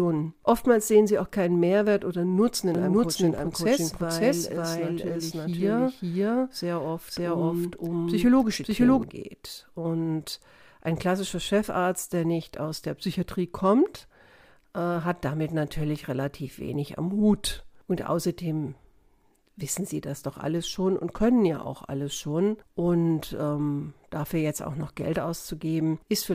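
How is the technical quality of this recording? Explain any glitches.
One glitch stands out: a doubled audio track from 2.75 to 9.03 s. A second copy of the speech runs about half a second behind, at roughly the same loudness. It is likely a second capture path or a misaligned edit. The echo is dry and full-band, with no room tail. It starts and stops abruptly.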